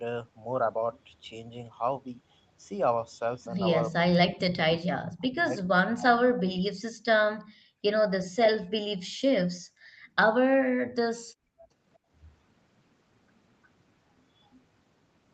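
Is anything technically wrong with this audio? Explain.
Yes, there are three kinds of echo-canceller trouble.

From 4.01 to 6.79 s the speech is suppressed in double talk: for about two seconds in total it dips by as much as about 40 dB, likely because the canceller muted the near talker while the far side spoke. Unlike gating, this cuts into the speech itself.

Echo leak appears at 5.01 to 5.44 s (about 20 dB below the speech) and faintly at 14.52 to 14.6 s (about 35 dB down). A delayed copy, 359 ms late, is heard, likely from loudspeaker sound the canceller failed to remove. The fixed lag separates it from reverberation.

The background is gated by the echo canceller at 7.44 to 7.83 s (about 35 dB), 9.07 to 10.15 s and 11.2 to 12.1 s (about 31 dB each). The room sound drops out briefly and then returns.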